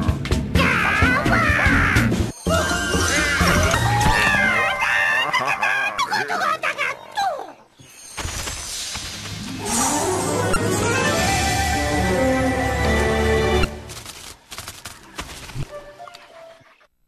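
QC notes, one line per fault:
3.71–3.75 s, 5.96–5.99 s, 10.53–10.56 s, 13.61–13.65 s, 15.60–15.63 s: damaged data in a compressed stream. Each event is a short chirp or blip of about 34 ms. Corrupted bytes break the frames here. The decoder misreads them, loses sync, and must find the next valid frame header.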